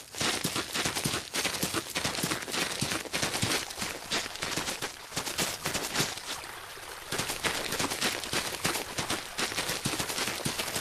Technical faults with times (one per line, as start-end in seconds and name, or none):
3.60-6.45 call bitrate drop